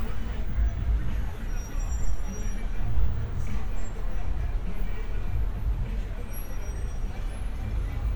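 There are no technical faults to describe in this sound recording.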